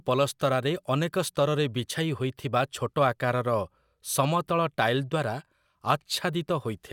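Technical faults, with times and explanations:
No technical faults can be heard anywhere in this speech clip. Nothing in the recording calls for a time or an explanation.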